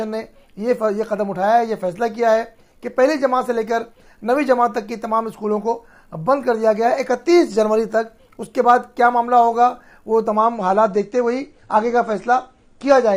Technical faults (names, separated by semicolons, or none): adaptive stream at a lower bitrate